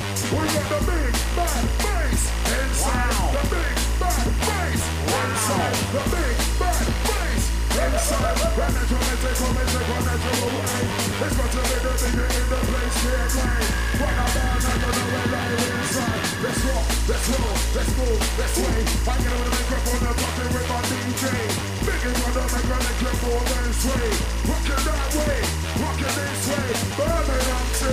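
Timecode bleed runs through the whole clip. Linear timecode from a neighbouring track or cable has leaked into the audio. Its square wave flips between tones near 1 and 2 kHz, about 15 dB under the sound. It chirps steadily, which fits 23.976 fps timecode.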